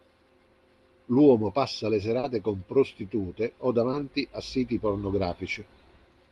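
Short concealed packet loss occurs at about 2.19 to 2.25 s and again at 3.91 to 3.95 s in this speech clip, which passed through a call codec. Roughly 40 ms of audio in the first gap and 20 ms in the second never reached the decoder in time. The receiver covered each hole by extending the preceding sound before blending back into the real signal, leaving a brief smear or wobble where that short stretch of speech was lost.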